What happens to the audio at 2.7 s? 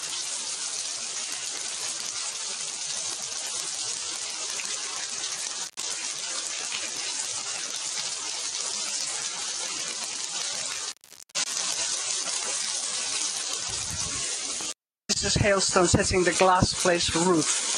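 At 2.7 s the audio is under a noise suppressor applied to music or sounds, active across the whole clip. Built for speech, it treats steady sound and decaying tails as noise. It pulls them down by roughly 5 dB, so the level pumps and thins.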